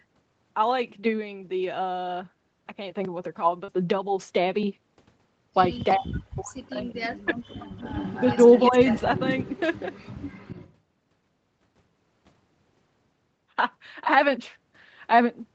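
At 3.64 to 3.69 s a brief smear passes through the speech, a sound stretched for a moment and then blended back. This is short concealed packet loss. About 40 ms of audio arrived too late for the decoder, and the receiver filled roughly 35 ms of it by extending the preceding sound, continuing its pitch where it was voiced or substituting shaped noise where it was not, before crossfading into the real signal.

From 5.92 to 5.96 s a faint, delayed scrap of speech appears under the main voice. It lags by 352 ms and sits far down, about 30 dB below the speech. This is an echo leak, likely caused by a loudspeaker on one side whose echo canceller let part of its microphone pickup through and returned it.

Right after, from 5.98 to 6.99 s, the talker's voice collapses in pieces. At its deepest it falls by roughly 40 dB, and the losses total about a second. This is speech suppressed in double talk, likely because both sides spoke at once and the echo canceller, unable to separate the local talker from the loudspeaker echo, attenuated everything.

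The echo leak returns at 7.03 to 7.09 s, now 331 ms late and louder at about 20 dB down. The same suppression then recurs at 7.25 to 7.74 s, again dipping by roughly 40 dB over about 400 ms of that span.

From 7.57 to 10.74 s the 331 ms echo is present, only about 15 dB below the speech. Within that stretch, at 8.71 to 8.75 s, the voice shows a small dip of about 5 dB from the same double-talk suppression.

Through the whole clip the speech has no content above 8 kHz, which matches the band limit of the Opus call path at 20 kbps.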